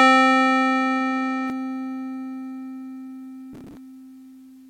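From the start to 1.5 s, the music sounds dull and boxy. Nothing reaches above 9.4 kHz, and new background noise sits roughly 30 dB under the music. The input was likely switched to a poorer device. At 1.5 s it clears, with no gap, and the level shifts by about 5 dB.

From 3.53 to 3.77 s, a gritty processor overload crackle tears across the music. The processor missed dozens of buffer deadlines over that stretch. Each missed buffer was simply skipped, leaving tiny hard-edged holes. Their spacing fits buffers of around 5 ms.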